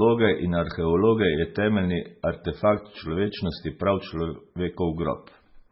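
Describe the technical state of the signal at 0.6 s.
At 0.6 s, as throughout, this is low-bitrate audio saved at a high bitrate: the speech was likely MP3-encoded very coarsely, fitting about 16 kbit/s, then re-saved high. It keeps smeared first-encode artefacts.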